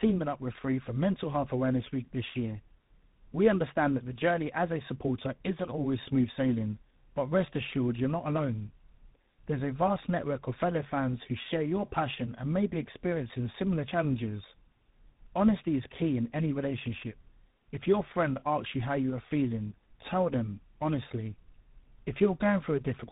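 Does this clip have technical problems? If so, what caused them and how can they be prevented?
Yes. The speech suffers from tandem speech coding throughout. It sounds rough, muffled and warbly. Nothing is heard above about 3.8 kHz. The call passed through GSM full rate at 13 kbit/s, then G.711 mu-law at 64 kbit/s, then G.726 at 32 kbit/s. That puts two lossy speech coders in a row. The second reworks the errors of the first, so the damage adds up. Keeping one codec end to end, or passing coded frames through without decoding, prevents this.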